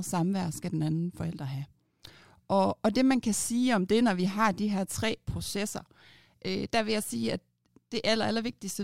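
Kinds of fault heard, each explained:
No kinds of fault are heard in this speech clip.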